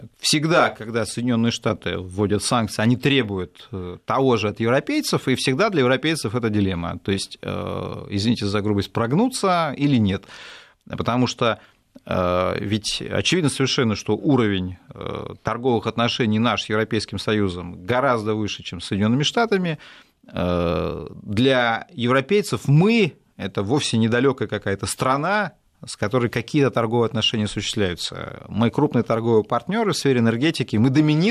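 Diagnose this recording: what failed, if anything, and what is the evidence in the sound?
Nothing in the signal chain has failed: the speech arrives as one continuous recording, with no dropouts, clipping, level jumps or timing disturbances anywhere in it.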